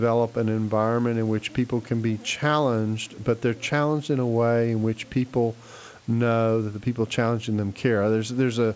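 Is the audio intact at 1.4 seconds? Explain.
Yes, at 1.4 seconds the speech is intact, with no dropout, glitch or other fault at that moment.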